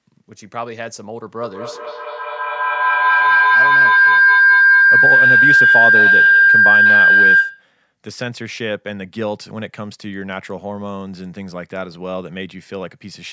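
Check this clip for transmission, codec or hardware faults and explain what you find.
One transmission fault is present, a feedback howl. Feedback howl, 1.42 to 7.74 s: two devices in the same room share the call, so sound loops from loudspeaker into microphone, gaining level each pass. Repeats roughly a fifth of a second apart swell into a ringing tone near 1.5 kHz, peaking about 13 dB above the speech.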